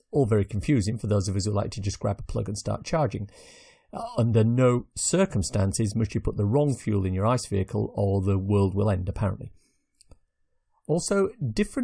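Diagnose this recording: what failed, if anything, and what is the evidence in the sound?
Nothing failed: no stage from capture through playback leaves any audible fault anywhere in the speech.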